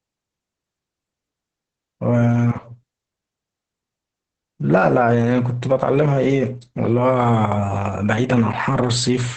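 Throughout the speech, the sound is muffled, hoarse and faintly robotic, with nothing above 8.5 kHz. This is heavy Opus voice compression: the SILK linear-prediction coder limits the band to wideband and codes the excitation coarsely, which fits a bitrate around 10 kbps.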